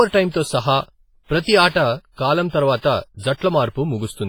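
Throughout the speech, heavy transform-codec damage is audible: ringing, washy consonants and a hiss that swells and fades with the voice, likely WMA compression at a low bitrate around 24 kbps. A spectrogram would show smeared onsets and gaps where weak components vanish.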